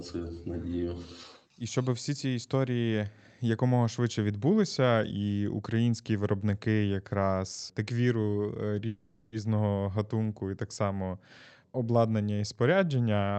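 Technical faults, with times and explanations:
8.87 to 9.34 s, call audio freeze: for just under half a second the speech stops advancing and the last sound is stretched into a fading buzzy tone, most likely because packets were delayed and the jitter buffer ran dry. Nothing goes fully silent and nothing is lost. When the speech resumes, it picks up where it stopped, now running about 450 ms late. On a spectrogram, this shows as smeared, repeating horizontal bands that decay. In the waveform, the envelope tapers smoothly rather than dropping to zero.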